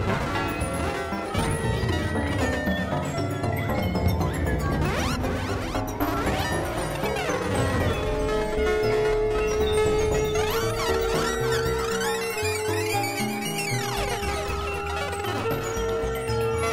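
No technical faults can be heard in this audio, so there are none to describe in time order.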